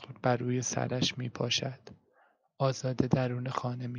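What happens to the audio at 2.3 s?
Nothing goes wrong at 2.3 s: the speech carries through that moment intact, with no dropout, click or other fault.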